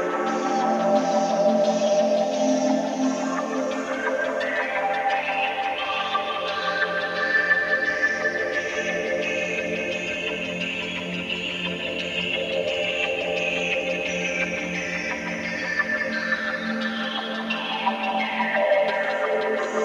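From start to finish, a timecode bleed sits behind the sound as a steady chirping warble, roughly 30 dB under the programme. Linear timecode at 24 frames per second has leaked in from an adjacent track or cable, its square wave toggling between tones near 1 and 2 kHz.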